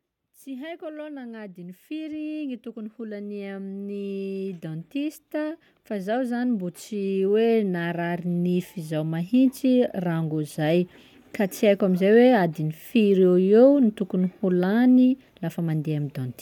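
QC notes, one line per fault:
0.44 to 9.39 s, automatic gain rising: the level climbs steadily by about 21 dB over roughly nine seconds as the gain control, judging the input too quiet, keeps turning it up. Voice and background noise swell together. That shared, gradual rise is what separates it from a speaker simply getting louder.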